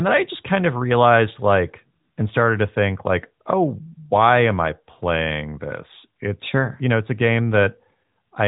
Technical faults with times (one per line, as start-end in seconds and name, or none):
none